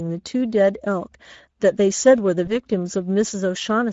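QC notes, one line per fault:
Throughout: Speex codec. Speech sounds hoarse and grainy. The upper band has a hissy, shaped-noise sheen rather than real detail. The damage is plainly audible and fits a mid-range Speex setting around 16.8 kbps. At that rate this CELP codec has too few bits to code the excitation signal faithfully, so the fine structure of each sound is replaced by an approximation that reads as noise and roughness.
2.45–2.56 s: VoIP packet loss concealed by the speech codec. For about a tenth of a second the sound smears into a brief, fading stretch, then stays weak before it settles. The short gap points to a single lost 20 ms frame. The decoder covered it by extending the last pitch and filter at falling gain. Because each following frame is decoded from that guessed state, the weakness lingers past the lost frame itself.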